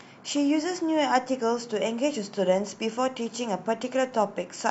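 No technical faults can be heard anywhere in this recording.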